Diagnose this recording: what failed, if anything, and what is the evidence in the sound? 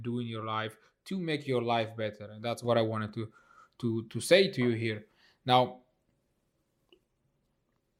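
A sudden gain jump at 2.65 s lifts the speech and its background noise together by about 6 dB, and the raised level holds to the end. This likely comes from a digital gain stage in call processing or the driver applying a new setting without a ramp.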